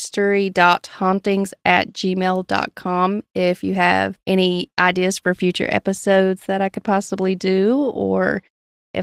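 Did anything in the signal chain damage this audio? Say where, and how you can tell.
No, nothing in the signal chain damaged this audio.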